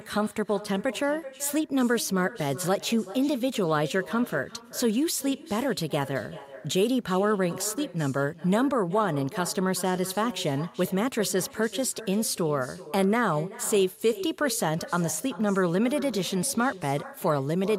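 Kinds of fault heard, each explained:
Echo with no canceller: the far end's loudspeaker feeds back into its microphone, so every phrase of this speech returns about 0.4 s later, about 16 dB down and thin. Unlike room reverberation, it is a distinct delayed repeat, not a smooth decaying tail.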